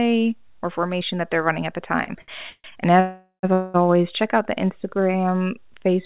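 Just after "they're running at the", short stalls from a late packet come at 2.04 s and 2.21 s. The jitter buffer ran dry, so the last sound is held for about 30 ms and then 69 ms before the audio resumes from the same point. You hear a brief drawn-out sound, not a gap.

Call audio freezes follow at 2.50 to 2.66 s, 3.00 to 3.45 s and 3.53 to 3.76 s, the last ending just before "check out the". They were likely caused by packets held up in transit. Unlike the stalls, these fills are longer and decay. The first two fade from a buzz or hiss into silence, the 3.00 s one into about 110 ms of it. The third is a buzz or hiss that ends without going silent. All of it sits within the narrowband, 4 kHz-limited sound of the G.711 call path.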